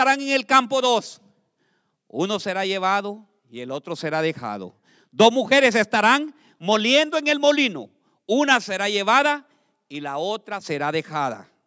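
Speech recording, with no audible technical faults anywhere.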